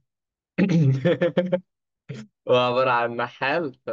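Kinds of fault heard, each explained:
Nothing stands out here as a technical fault. The speech just comes through as it is without any dropouts, glitches or distortion to point to.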